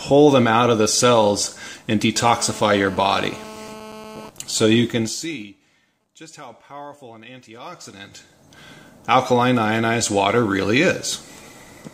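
From 4.89 to 5.52 s, zipper noise rides on the sound. The level falls by about 20 dB in steps of about 2 dB. Nothing smooths the steps. Each lands as a small click, around twenty a second, giving a brief ticking zip.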